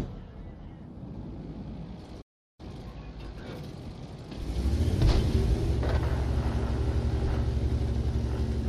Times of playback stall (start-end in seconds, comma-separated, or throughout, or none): 2.21-2.60